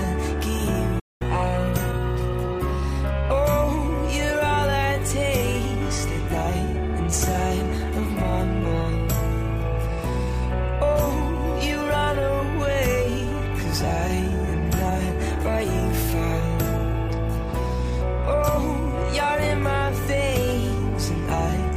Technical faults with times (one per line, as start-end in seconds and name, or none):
0.99-1.22 playback stall
1.22-3.31 catch-up at higher speed